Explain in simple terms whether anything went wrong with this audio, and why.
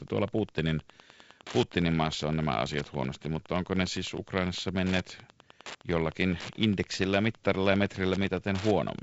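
Wi-Fi interference runs through the whole clip: faint, regular ticks every 102.4 ms from a nearby wireless radio, unlike the continuous drone of mains hum.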